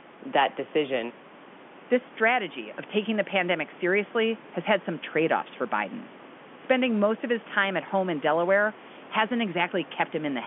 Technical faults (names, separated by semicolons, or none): none